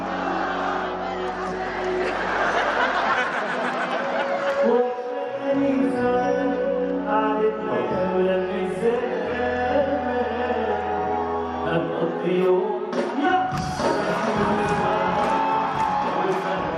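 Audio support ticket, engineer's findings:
No faults found on a full listen, nothing audible to chase here, so the ticket can be closed from the audio side.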